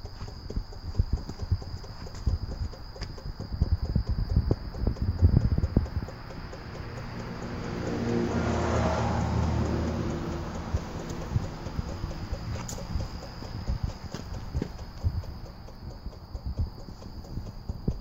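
Three isolated sharp clicks sit in the audio at 6.97 s, 11.43 s and 16.90 s, each the signature of dropped samples: the likely cause is a tiny fraction of a millisecond of data going missing, so the waveform jumps abruptly from one value to a later one. On a waveform each shows as a sudden step discontinuity; on a spectrogram, as a thin vertical line spanning the whole frequency range, with no gap in the surrounding sound.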